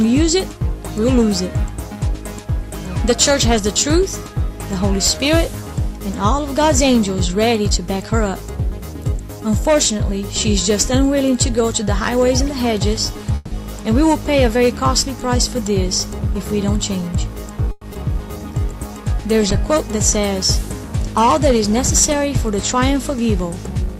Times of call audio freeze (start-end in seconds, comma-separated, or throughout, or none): 13.35-13.53, 17.71-17.83